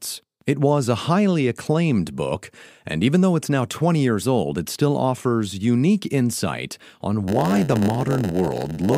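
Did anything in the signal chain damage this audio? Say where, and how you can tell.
Yes. From 7.27 s, just after "offers unique insight on", a steady buzz at about 92 Hz appears, and the speech drags to about 0.92 of its normal speed while keeping its timbre. This lasts to the end of the clip. It is a block size mismatch (padded) at the driver or buffer stage. Each block written is about 8% shorter than the block read, and the shortfall is filled with zeros. Those silent gaps repeat at the 92 Hz block rate and stretch the timing.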